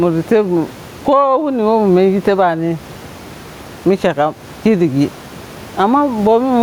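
Throughout, gain pumping is heard: the input gain was likely set far too high, so a fast limiter clamps each loud syllable, swinging the level by around 15 dB. The room noise sits about 32 dB below the speech, and the speech is left squashed and flat.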